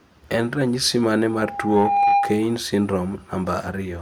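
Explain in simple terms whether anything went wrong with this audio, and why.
Something did go wrong. From 1.28 to 2.61 seconds there is loudspeaker feedback squeal. A single steady tone near 804 Hz appears and swells for a little under a second. It ends up louder than the speech. This happens when a microphone picks up the loudspeaker it is feeding. The sound goes round and round that loop. At one pitch it gets louder on each trip, so it grows into a squeal until the amplifier limits it or the loop is broken.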